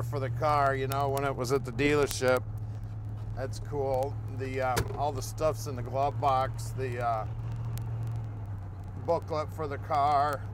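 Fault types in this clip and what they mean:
Word clock ticks: a digital input running on its own clock, unlocked from the sender's, slips against it and drops or repeats a sample at each slip. Here single-sample ticks recur roughly every 40 ms from 0.11 s to 10.50 s, pointing to a clock mismatch of around 500 ppm.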